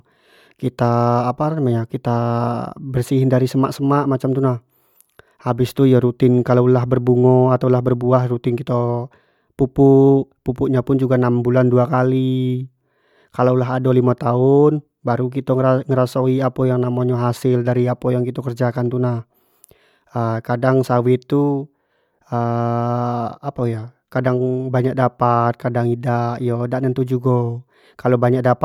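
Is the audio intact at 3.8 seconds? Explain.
Yes, the audio is intact at 3.8 seconds, with no fault heard at that moment.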